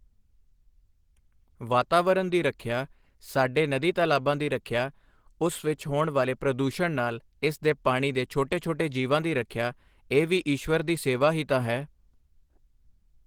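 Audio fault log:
Throughout: Opus compression. The speech has a plainly audible rough, grainy texture, with a hoarse edge. The likely cause is Opus coding starved of bits, which fits about 16 kbps. At that rate the encoder keeps each band's energy but fills the detail with noise or folded copies of lower bands, and the sound points to its hybrid speech mode. Bandwidth isn't narrowed, though. Content reaches up to about 20.2 kHz.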